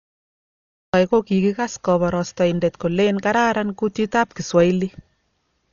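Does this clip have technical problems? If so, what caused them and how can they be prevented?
Yes. The speech sounds dull and muffled throughout, with nothing above 7 kHz and a rough, fluttering noise clinging to voiced tones. This is likely Dolby Digital compression at a very low bitrate, around 40 kbps: the encoder narrowed the band and left many frequency lines without mantissa bits, so the decoder filled them with noise. Encoding at a higher bitrate, or with a less constrained codec, prevents this.

The first 0.94 s is digital silence, and the speech then begins abruptly in the middle of a sound at 0.94 s, with no natural attack or fade. This is a cut-off start: the recording or stream began late, after the speaker had already started. Starting capture before the talker begins, with some pre-roll, prevents it.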